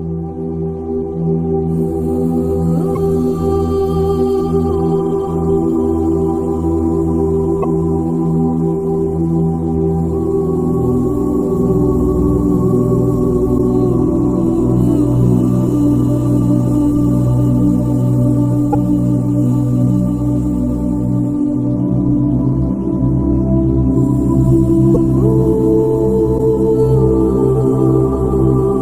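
At 2.94, 7.62, 13.57, 18.72, 24.94 and 26.37 s the audio jumps forward, with a garbled patch of about 30 ms at each join. This is likely a broken MP3 bit reservoir: frames were cut out, so the next frame reached back for borrowed bits and decoded another frame's bytes. Each patch is just over one 26.1 ms frame. Unlike a clean dropout, the audio does not resume where it stopped.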